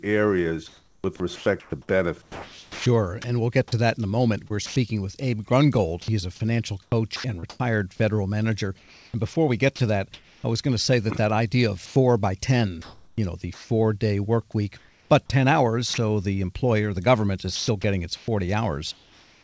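From 0.68 to 4.76 s and again from 6.02 to 10.44 s, just before "I was going to", the speech is chopped by the voice detector. About 1.4 s and 1.1 s of sound respectively is swapped for synthetic hiss, so syllable edges vanish. The likely cause is the sender's detector repeatedly switching transmission off and on.

At 11.86 to 11.96 s, and briefly at 15.94 s, sound is dropped by the voice detector. The detector likely mistook quiet speech for background and stopped sending, so roughly 70 ms and then 40 ms of speech give way to steady noise before the signal returns.

From 12.82 to 13.70 s, and from 14.78 to 15.10 s after "day work week", comfort noise replaces the background. During these pauses the sender likely transmitted nothing, and the receiver filled the gap with featureless synthetic noise. In the second gap that noise sits about 4 dB below the real background, which is itself about 34 dB under the speech.

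From 17.56 s to the end, after "employer the government is", the speech is chopped again, with about 0.8 s lost to comfort noise. This has the likely cause of the earlier stretches. Throughout the clip, the wideband call codec leaves nothing above 8 kHz.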